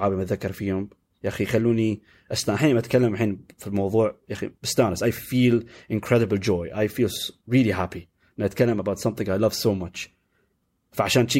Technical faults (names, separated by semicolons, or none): none